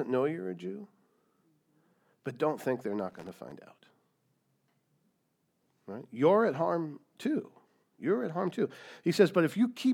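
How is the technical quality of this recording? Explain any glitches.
The speech recording has one glitch, from 3.10 to 3.52 s, just after "but don't think they're": a burst of loose connector crackle lasting about 0.42 s. A worn or dirty contact in the signal path was shifting, so it kept losing and regaining connection in quick succession. Each break chopped the audio, and the uneven timing of those breaks makes an irregular spell of crackling and scratching over the speech.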